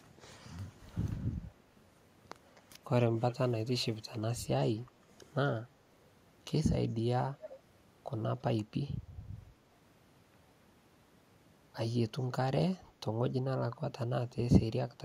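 Speech with an echo leak: delayed copies about 15–40 dB below the speech, about 250–275 ms late at 2.55, 3.30, 7.42 and 12.20 s, likely a far-end echo canceller missing loudspeaker pickup.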